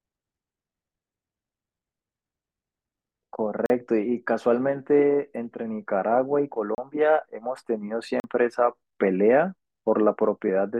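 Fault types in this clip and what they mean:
Block of digital silence: The speech drops to silence for 40 ms, 32 ms and 40 ms. Each hole has hard edges, cutting out and back with no fade.
Compressed frames skipped: Near 10.47 s the speech jumps ahead by about one 21.3 ms frame.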